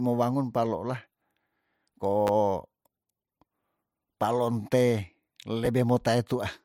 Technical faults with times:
2.27-2.29 chunks out of order
5.65 chunks out of order

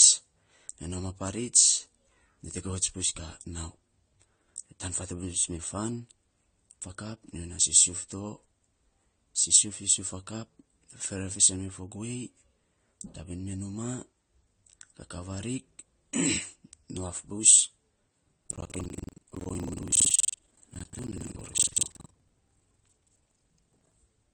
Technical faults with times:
0.00-24.33 transcoding between lossy codecs
18.39-23.92 buffer tearing

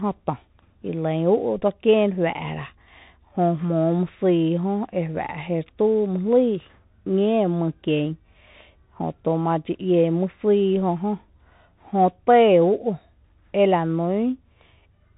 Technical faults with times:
0.00-15.18 Bluetooth CVSD headset codec

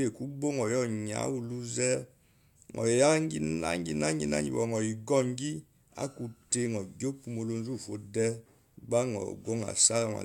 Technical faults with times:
none

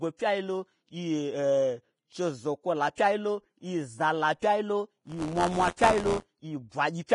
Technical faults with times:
0.00-7.15 Vorbis compression
5.02-6.30 buffer tearing

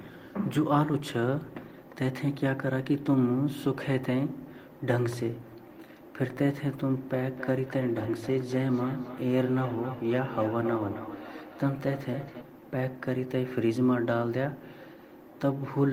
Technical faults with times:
7.21-12.48 feedback echo between two devices

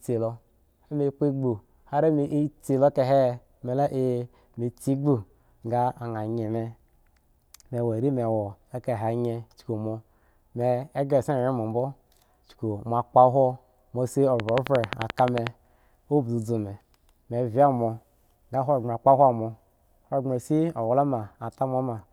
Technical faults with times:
14.40-15.48 train of clicks

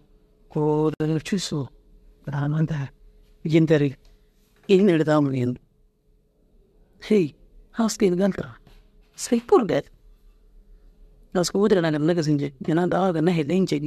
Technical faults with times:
0.94-1.00 gap at a join of encoded pieces

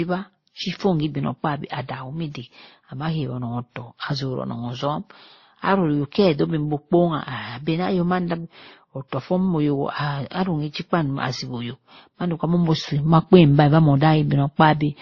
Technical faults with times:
0.00-15.02 transcoding between lossy codecs

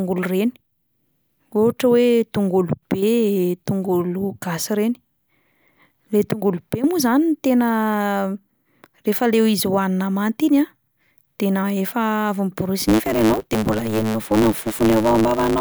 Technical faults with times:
12.83-15.60 block size mismatch (truncated)

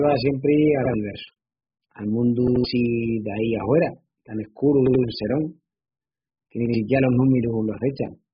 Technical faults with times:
0.00-8.34 AAC compression

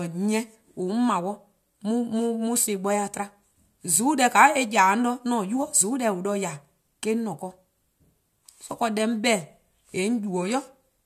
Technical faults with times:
none

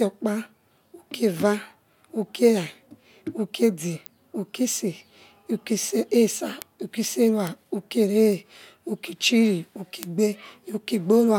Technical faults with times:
0.22-11.31 word clock ticks

